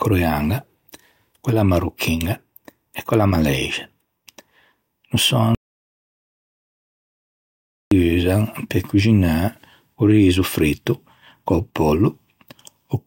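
From 5.55 to 7.91 s, an audio dropout to silence, likely from lost input, leaves silence with no room tone, unlike a noise gate's dip.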